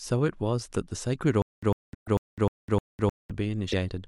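A likely stall in the player or stream interrupts this speech recording from 1.42 to 3.31 s. At each retry the same 100 ms fragment replays, six times in all, about every 307 ms, with roughly 206 ms of digital silence between bursts, a stutter with silent gaps that loses the audio in between. Missing MP3 frames likely broke the bit reservoir, so later frames read borrowed bits from the wrong data. This produces brief glitches at 1.93 to 2.08 s and 3.71 to 3.73 s, with a 24 ms frame length that fits MP3 at 48 kHz.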